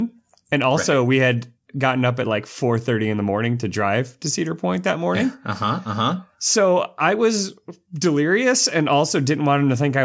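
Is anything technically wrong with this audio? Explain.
No, nothing here is a fault: the speech carries the ordinary signature of call microphone processing, with its high-pass filter trimming the lowest bass and no content above 8 kHz.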